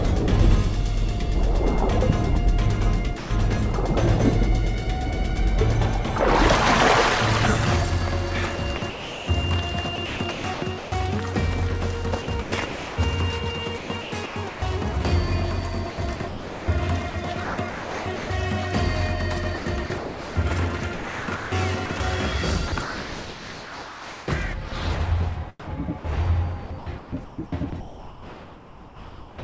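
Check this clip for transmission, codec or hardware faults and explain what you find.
Yes, there are transmission faults: one short dropout and six chopped stretches, all likely from the sender's voice detector. The audio carries nothing above 8 kHz, consistent with a G.722 call path.

Sound dropped by the voice detector, 3.18 to 3.30 s: the sound gives way to steady noise for 120 ms. The detector likely took it for background and stopped sending, so the receiver filled in comfort noise.

Sound chopped by the voice detector occurs in six stretches:
8.56 to 10.92 s, with 940 ms replaced
12.22 to 12.98 s, with 480 ms replaced
13.78 to 14.62 s, with 440 ms replaced
15.90 to 18.30 s, with 1.22 s replaced
19.58 to 24.72 s, with 2.62 s replaced
25.60 to 29.38 s, with 2.2 s replaced

In each stretch the sound repeatedly breaks into holes of synthetic noise. The cause is the detector likely toggling sending on and off, with comfort noise filling each gap.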